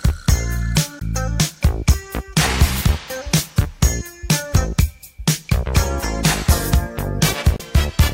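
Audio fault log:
0.98 to 1.02 s and 7.56 to 7.61 s, damaged data in a compressed stream: two brief disruptions of about 40 ms each break the sound. At both points part of the encoded data is corrupt, so the decoder cannot read those frames properly, loses its place in the stream and has to hunt for the next valid frame header before playback resumes. The result is a short burst of garbled output or a brief gap.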